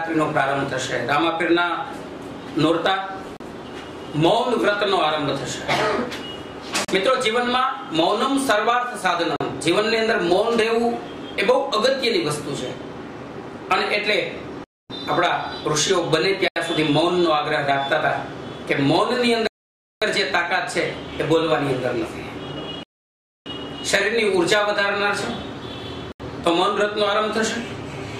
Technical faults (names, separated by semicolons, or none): Bluetooth stall